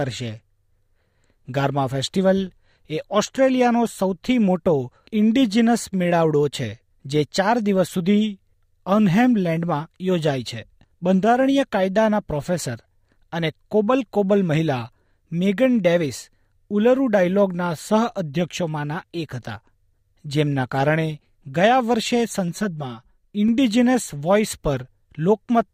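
At 22.48 s the sound turns hollow and phasey. This is channel delay (comb filtering), and it lasts until 23.48 s. One channel runs roughly 5 ms behind the other, and when the two are summed to mono, content common to both cancels at regularly spaced frequencies, the first near 100 Hz. On a spectrogram this shows as fixed horizontal dark bands stacked evenly up the spectrum for that one second.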